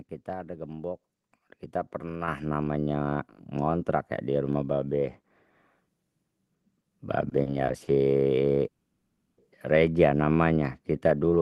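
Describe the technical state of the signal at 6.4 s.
At 6.4 s the speech is intact, with no dropout, glitch or other fault, only the ordinary coding of the call path it travelled through.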